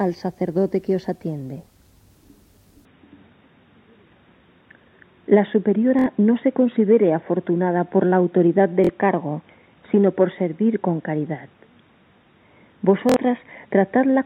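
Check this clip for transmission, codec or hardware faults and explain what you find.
Two kinds of fault are present: a change of capture device partway through, and three short Bluetooth stutters.

From 2.85 s to the end, the sound abruptly loses its top end. Nothing remains above about 3.8 kHz, the level shifts by roughly 5 dB, and a new noise floor appears, roughly 45 dB below the signal. There is no gap at the transition. This is likely an input switched to a poorer device, such as a headset's call profile or another microphone with a narrower band. From that point on the audio sounds dull and boxy.

Bluetooth stutter occurs at 5.99–6.06 s, 8.84–8.89 s and 13.09–13.17 s. Each event spans about 70 ms, 46 ms and 70 ms respectively. When packets fail to arrive on time, the receiver keeps replaying its last short buffer until new data comes in, so a tiny slice repeats as a brief buzzing stutter. 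The spans fit two or three lost packets each. After each stutter, playback resumes further along, as though the audio had continued underneath.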